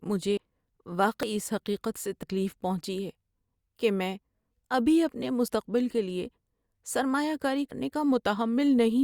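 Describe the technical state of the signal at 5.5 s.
At 5.48 s, between "ابھی اپنے" and "کے لیے", there is a dropped buffer (overrun). Likely unread samples were overwritten, so about 20 ms vanishes and the speech jumps ahead.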